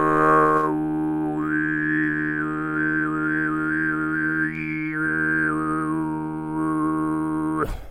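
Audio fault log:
No faults can be heard anywhere in this recording of sounds. Nothing in it calls for a timed entry in this log.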